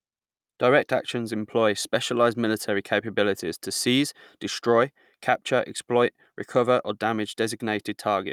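No technical faults can be heard anywhere in this speech recording. There is nothing to place on a timeline.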